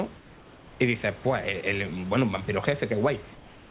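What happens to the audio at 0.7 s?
At 0.7 s you're inside a stretch of comfort noise in place of the background, running 0.17 to 0.8 s: the room tone turns flat and featureless, about 2 dB quieter, likely because the sender paused transmission and the receiver filled the gap with synthetic noise.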